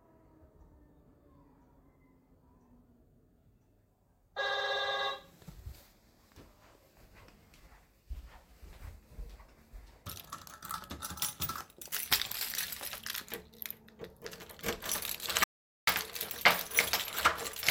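A recording of sounds that cuts abruptly to silence from 15.44 to 15.87 s, about 0.43 s with no room tone, then resumes mid-flow. This audio dropout to silence likely comes from the input briefly disconnecting or muting while the recorder kept writing silence.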